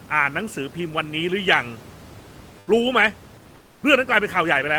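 From 3.55 to 3.79 s, comfort noise in place of the background: likely discontinuous transmission swaps the room tone for flat, featureless hiss about 4 dB quieter, a smooth, even band on the spectrogram.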